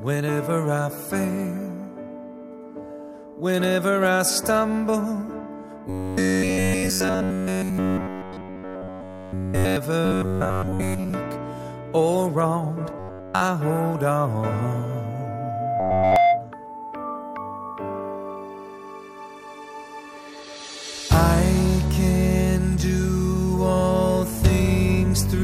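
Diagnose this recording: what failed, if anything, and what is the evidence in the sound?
Robotic sound from repeated short buffers at 5.90–9.77, 10.05–11.14, 12.99–13.42 and 15.80–16.16 s, likely a driver or buffer underrun: 93.8 Hz buzz, which fits repeated slices of about 10.7 ms, shows as a rigid harmonic comb on a spectrogram.

Loudspeaker feedback squeal from a playback-to-microphone acoustic loop at 14.94–16.54 s: a 699 Hz tone swells over about one second to about 10 dB above the signal, forming a single brightening horizontal line on the spectrogram.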